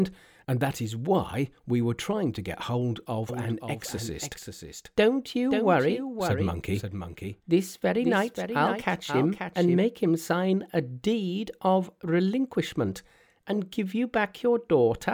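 From 3.29 s, after "to get hold of", until 9.77 s, before "make him sign a", a clean copy trails about half a second behind, somewhat quieter: a doubled audio track, likely from a second, slower capture path.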